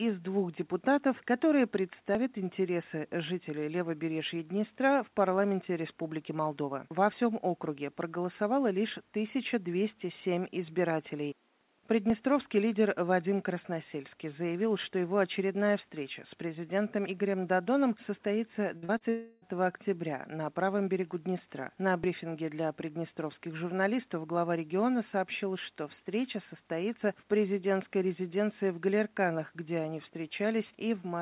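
Brief skips, each dropping a few hundredths of a second with the two sides butted together, fall at 2.15, 12.1, 17.08, 22.04 and 27.01 s. Their spacing in multiples of 5 s points to audio missing between chunks, likely from a recorder or processor losing a sliver each time it closes one 5 s block and opens the next. At 18.77 s the sound is held and fades for about 54 ms before jumping ahead. This is a burst of packet loss of roughly 60 ms that the receiver bridged by extending the last sound. Right after, two short smears at 18.85 to 18.92 s and 18.98 to 19.03 s are short concealed packet loss, each about 30 ms that never reached the decoder in time and were patched with synthesized continuation. From 19.09 to 19.45 s a stretch of about 330 ms is replaced by a fading continuation of the preceding sound, with no true silence, before the audio resumes further on. This is likely a long network dropout. 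Throughout, the G.711 A-law call path leaves nothing above 4 kHz.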